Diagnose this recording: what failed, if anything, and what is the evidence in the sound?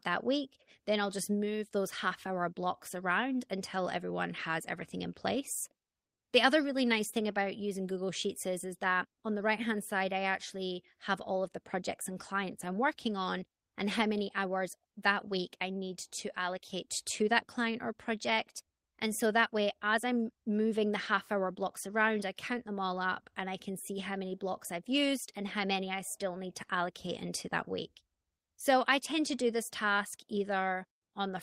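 Nothing failed: no stage of this recording shows a fault, and nothing in the sound gives evidence of one.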